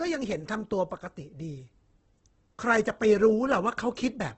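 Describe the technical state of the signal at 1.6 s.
At 1.6 s the speech sits inside damage that runs through the whole clip. It sounds grainy and rough, with nothing above 8.2 kHz. This is likely Opus compression in music mode, filling starved bands with noise, which fits roughly 12 kbps.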